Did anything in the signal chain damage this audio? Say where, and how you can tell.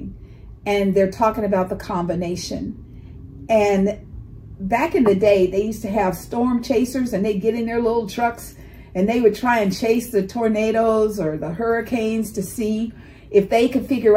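No, the signal chain is undamaged.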